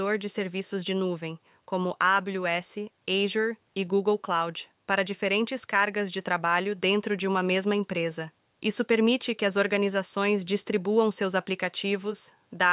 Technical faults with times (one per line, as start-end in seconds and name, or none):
none